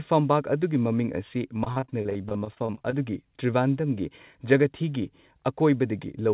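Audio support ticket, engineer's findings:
Repeated packet loss, 1.64–2.94 s: successive packets lost, each hole patched by extending prior audio; speech choppy and robotic, gaps up to 41 ms, about a third concealed.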